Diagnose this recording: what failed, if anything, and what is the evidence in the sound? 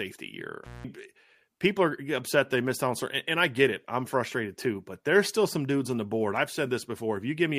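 Intermittent contact in the analogue wiring, from 0.64 to 0.85 s: the speech drops out for about 180 ms, with crackle at each edge. A loose cable or plug briefly opened the signal path, leaving faint hiss until contact returned.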